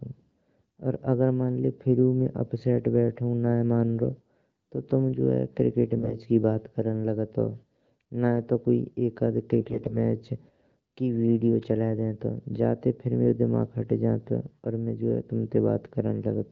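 From 5.95 to 6.16 s, just before "की बात करन लागतों", the speech turns briefly hoarse and gargly, and again from 9.60 to 9.98 s, right after "नैये तो एक अध", it goes scratchy while pitch and level hold. These are AMR bit errors. Roughly a tenth, then somewhat fewer, of the weakly protected frame bits were corrupted, misplacing the excitation pulses and skewing fine pitch, gain and spectral values. The surrounding wideband coding stays clear enough to suggest about 12.65 kbit/s.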